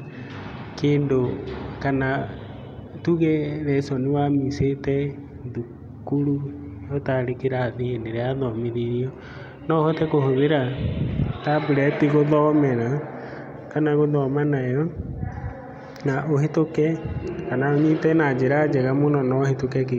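Speech recording with no technical faults found.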